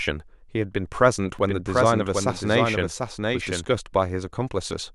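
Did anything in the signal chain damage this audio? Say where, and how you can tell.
Yes. From 1.39 s to 3.65 s there's a doubled audio track: a second, full-band copy of the speech trails about 0.7 s behind, roughly 5 dB quieter, with no room colour, and it cuts in and out abruptly. That likely points to a second capture path or an editing slip.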